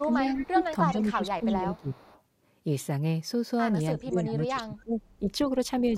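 At the far end, an echo canceller likely failed to remove all of the loudspeaker sound its microphone picked up. That residue came back as an echo leak from 0.00 to 0.48 s and again from 0.87 to 2.22 s: a faint copy of the speech trailing 330 ms behind, about 20 dB below the main level. It sounds like a ghostly repeat under the talker.

Overlapping the first stretch, from 0.02 to 2.06 s, is speech suppressed in double talk. When both sides spoke at once, the canceller could likely not separate the local talker from the returning echo and attenuated everything. For about a second and a half in total, the speech dips by up to roughly 15 dB, sounding pulled back. The same fault returns more severely from 3.97 to 5.30 s. Here the speech is choked down by up to around 25 dB for about a second.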